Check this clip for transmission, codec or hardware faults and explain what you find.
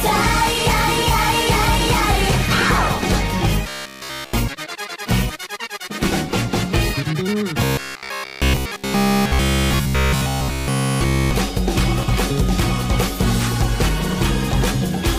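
Two stretches of robotic sound from repeated short buffers stand out, from 3.69 to 4.34 s and again from 7.64 to 11.31 s. In both, the sound collapses into a rigid metallic buzz at about 66.7 Hz, with essentially all of the material replaced by repeats. The likely cause is audio arriving too slowly, so playback loops the last fragment, which at that rate is about 15 ms long, while fresh audio is skipped. The fixed buzz pitch distinguishes it from a plain dropout, which would leave silence.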